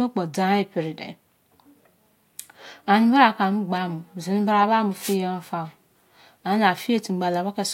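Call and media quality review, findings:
Wireless microphone noise hit, 4.99–5.17 s: analogue FM radio link fades as reflections cancel, receiver noise rises, giving a brief static swish over the speech.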